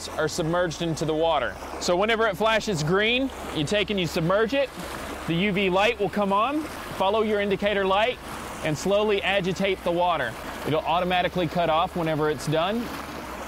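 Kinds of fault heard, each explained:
No technical faults heard.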